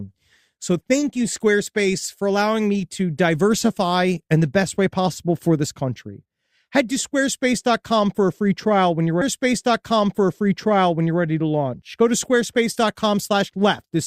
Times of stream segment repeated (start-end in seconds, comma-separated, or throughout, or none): 9.21-11.21